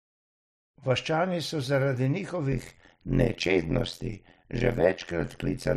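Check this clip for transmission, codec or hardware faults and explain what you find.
One fault is present: overlap-add ripple, from 2.52 s to the end. Frames were rejoined with overlaps that don't sum evenly, so the level dips about 60 dB around 100 times a second. The speech turns buzzy and metallic, unlike hum, which persists through pauses.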